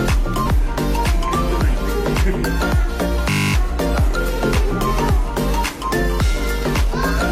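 At 0.42 s, compressed frames are skipped. Roughly three 46.4 ms frames never play, so the audio jumps ahead. At 3.30 s, a system hang loop starts. A 20 ms buffer repeats twelve times until 3.54 s, giving a steady 50 Hz buzz. At 3.90 s, about two more frames are skipped, with another short jump.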